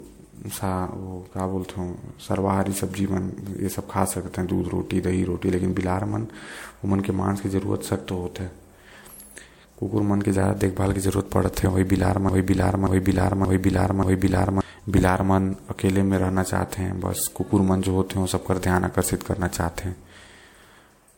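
Transcoding between lossy codecs runs throughout. Nothing sounds above 16.6 kHz, and two sets of coding artefacts are heard together, likely from a low-rate MP3 re-encoded as WMA.

From 12.29 to 14.61 s, a broken-record loop repeats a 0.58 s fragment four times, back to back. The likely cause is a stalled stream resending its last piece, and the audio for that span is lost.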